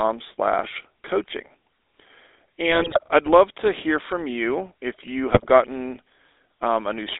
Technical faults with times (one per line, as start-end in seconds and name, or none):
0.00-7.19 GSM full-rate codec
2.70-3.04 GSM bit errors
5.30-5.50 GSM bit errors